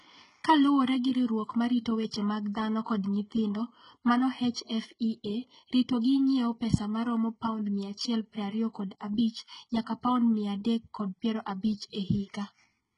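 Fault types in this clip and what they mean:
HE-AAC compression: treble above the crossover is rebuilt rather than coded, so sibilants sound gritty and lispy; spectrograms show copied, smeared upper bands ending sharply at 11 kHz, likely from heavy low-bitrate coding, about 12 kbps.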